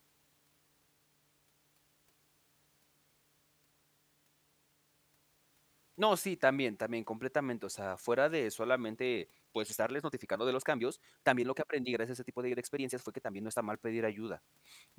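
At 8.92 s, right after "o sea fuera de", the speech suddenly rushes forward. This time-stretched section runs to 13.58 s and plays about 1.44 times faster than the surrounding audio. The pitch does not rise to match. The pace jumps abruptly at both ends. The sped-up stretch sounds hurried. The likely cause is software compressing this part to fit a shorter length, dropping fragments to hold the pitch steady.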